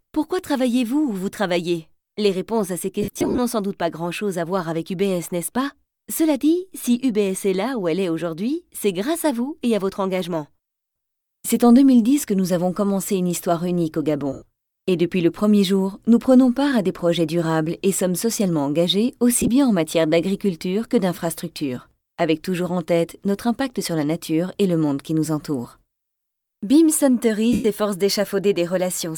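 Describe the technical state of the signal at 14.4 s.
Around there you're hearing lost LE Audio frames, from 14.33 to 14.42 s. That 90 ms gap fits about a dozen dropped LC3 frames. The decoder replays the last spectrum with random signs and then fades it, so the sound turns into a brief, noisy, dimming smear.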